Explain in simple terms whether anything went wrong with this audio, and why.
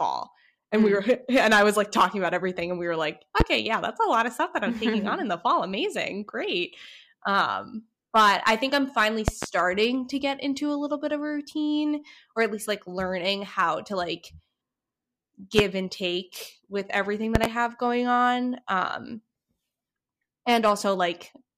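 Something in the recording chain likely received sudden electrical jolts, such as a plug being nudged, a switch, or a burst of static. Each one lands on the signal as a loud pop. The speech carries on underneath, with sharp snaps well above it at 3.40 s and 15.59 s, and quick double pops from 9.28 to 9.46 s and from 17.35 to 17.47 s.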